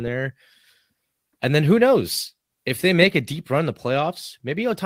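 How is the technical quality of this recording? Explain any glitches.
No glitches can be heard anywhere in the recording.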